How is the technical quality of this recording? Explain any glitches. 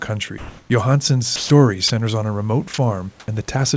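The recording carries several short call-transmission glitches, heard against room noise about 38 dB below the speech and a band limit at 8 kHz that fits a wideband call codec such as G.722.

Comfort noise in place of the background, 0.38–0.70 s and 3.20–3.28 s: the real room sound turns into steady, featureless hiss, shifting level by about 2 dB and about 6 dB. This is likely because transmission paused and the receiver synthesized filler noise.

Sound dropped by the voice detector, 1.36–1.50 s (about 90 ms of speech lost), 1.88–1.90 s and 2.74–2.78 s: speech briefly gives way to flat noise. The likely cause is the sender's detector mistaking quiet speech for background.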